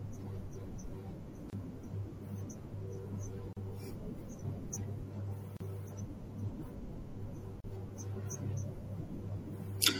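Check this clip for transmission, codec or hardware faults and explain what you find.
Two problems show up in this speech. The compression runs the whole way through, and there are short dropouts roughly every 2 seconds.

MP3 compression: throughout, the speech sounds watery and swirly with smeared s sounds. That's likely a low-bitrate MP3, around 64 kbps, starving weak frequency lines and cutting the treble.

Gap at a join of encoded pieces: brief silences at 1.50 s (29 ms), then 3.53, 5.57 and 7.60 s (38 ms each). Separately encoded chunks were spliced without trimming encoder delay and padding.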